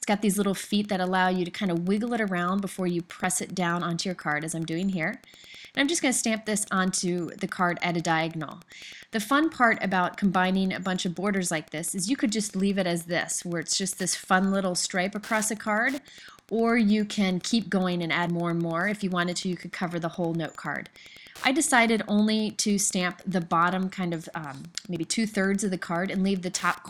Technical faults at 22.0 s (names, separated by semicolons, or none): Wi-Fi interference